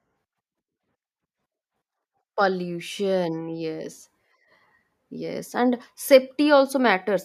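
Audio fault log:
No audible faults found.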